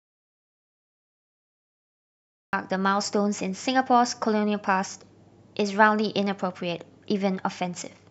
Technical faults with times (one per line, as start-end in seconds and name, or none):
0.00-2.53 audio dropout to silence